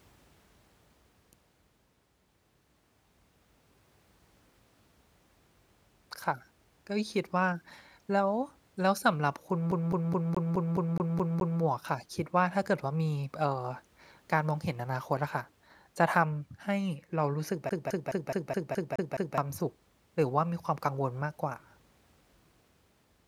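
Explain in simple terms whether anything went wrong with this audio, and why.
Twice, from 9.71 to 11.61 s and from 17.69 to 19.38 s, the speech gets a CD stuck on one turn: a 0.21 s fragment repeats about eight or nine times, with a brief mute at each jump, like a scratched disc skipping back one track.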